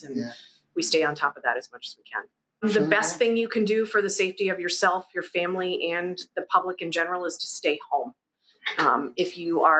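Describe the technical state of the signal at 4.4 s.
At 4.4 s the signal is intact, with no dropout, glitch or distortion, only the ordinary call-path band limit that leaves nothing above about 8 kHz.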